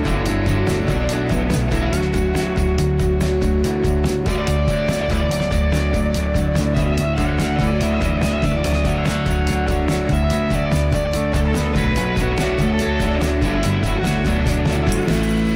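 Nothing is technically wrong with this audio, and no fault can be heard anywhere in it.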